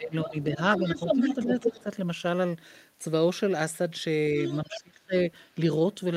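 From 0.00 to 0.59 s, speech is suppressed in double talk: the echo canceller likely cannot separate the two talkers, so it turns the speech down by about 15 dB. Within that span, from 0.23 to 0.44 s, the other side's voice leaks through faintly, likely since uncancelled loudspeaker sound reaches the microphone. From 0.73 to 1.83 s that leak returns at roughly the talker's own level, while the speech dips slightly at 0.99 to 1.19 s and by about 10 dB at 1.36 to 1.88 s. A brief leak at 4.44 to 4.57 s comes just before a deep suppression of about 30 dB from 4.63 to 5.26 s, which nearly cuts the speech out.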